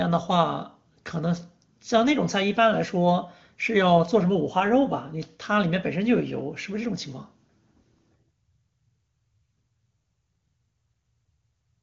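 No technical faults are audible.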